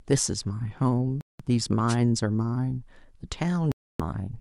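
Speech, and it has two clean holes where the sound just drops out: one from 1.21 to 1.42 s, about 186 ms of silence, and a longer one from 3.72 to 4.01 s, about 279 ms. When the sound comes back it has moved on, as if it kept playing underneath. That points to a likely Bluetooth dropout, where packets miss their deadline at the headphones and get thrown away rather than played late. The sizes of the gaps fit somewhere around eight and twelve lost packets. Between them, at 1.88 to 1.96 s, there's a quick burst of static: a wireless microphone noise hit. The analogue FM radio link fades for a moment as reflections cancel the signal, receiver noise swells up, and you get that short swish before the signal recovers.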